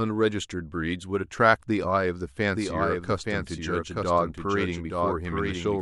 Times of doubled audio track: 2.54-5.81

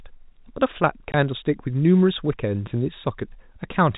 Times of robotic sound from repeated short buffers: none

